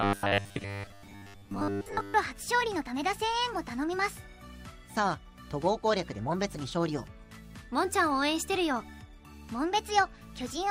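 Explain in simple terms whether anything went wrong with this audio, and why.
Robotic sound from repeated short buffers runs from 0.01 to 2.14 s. New audio likely arrived too slowly, so a tiny 10 ms slice kept being replayed in place of most of the real sound. That repetition forces a fixed, metallic 100 Hz buzz.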